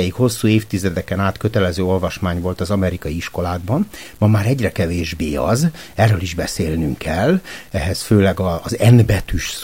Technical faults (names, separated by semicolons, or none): low bit depth without dither